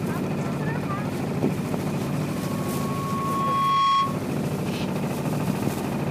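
From 2.30 s to 4.25 s there is loudspeaker feedback squeal: a 1.1 kHz tone swells over roughly a second and a half until it sits a few dB above the sound, then cuts off. The spectrogram shows one bright horizontal line; the waveform envelope bulges.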